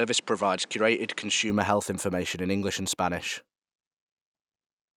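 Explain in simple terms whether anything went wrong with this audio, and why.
Input switched to a poorer device, from the start to 1.5 s: for that stretch the speech sounds duller, with nothing above about 10.5 kHz, and carries a faint background noise of its own. At 1.5 s it clears up with no gap and no jump in loudness. The likely cause is the recording picking up sound through a lesser microphone or headset at first, then moving to the better one.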